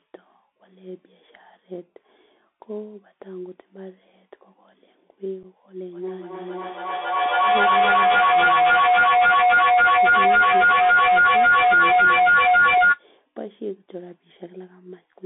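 Bluetooth CVSD headset codec damage runs through the whole speech clip. The sound is confined to a narrow band of about 250 Hz to 3.6 kHz, which fits a 64 kbps CVSD headset link. That codec sends a single up-or-down bit per sample with a step size that keeps adapting. Here the damage is plainly audible. Sibilants turn scratchy, loud bright moments distort where the step cannot keep pace, and a grainy hiss sits beneath the speech.

Unconcealed Bluetooth headset packet loss strikes at 5.43 s. Roughly 7.5 ms of audio vanishes, about a couple of packets' worth on the link between headset and phone. Nothing fills the gap but silence or an idle pattern. The result is a brief hole with hard edges that can click, and on this CVSD link the speech returns momentarily quieter before settling.

Feedback howl takes over from 5.93 s to 13.08 s. Two devices on the same call share a room, so each pass from loudspeaker back into microphone arrives stronger than the last. 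The repeats narrow toward the frequencies the loop favours and settle into a tone near 1.5 kHz. The loop delay is about 0.3 s, and the howl peaks at about 12 dB above the speech, lasting until the loop is broken.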